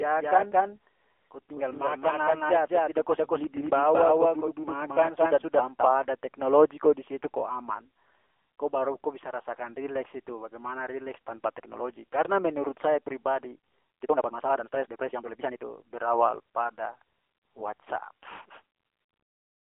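It's a speech clip squeezed through an AMR narrowband mobile codec the whole way. Nothing gets above 3.5 kHz, and the heavy buzzy, synthetic grain fits a low rate around 6.7 kbps. From the very start until 5.94 s there's a doubled audio track, a same-level copy trailing by about 200 ms and ending abruptly just before "ada teknologi ko di". That's likely a second, slower capture path mixed in. Then, right after "menurut saya", the section from 13.49 to 15.65 s is a time-stretched section. It runs at 1.92 times speed with the pitch unchanged, so it sounds choppy and rushed, likely from software squeezing it to fit.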